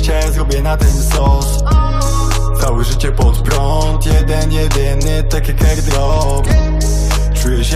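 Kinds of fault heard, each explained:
Overlap between stream segments: Two chunks of the stream claimed overlapping time stamps, and the player trimmed the overlap away even though that sound hadn't actually been duplicated. Around 3.45 s, roughly 20 ms of audio goes missing and the waveform jumps straight across the gap, so you hear a quick click or tiny skip. It happens just once, so there's no regular ticking pattern, just that single hiccup.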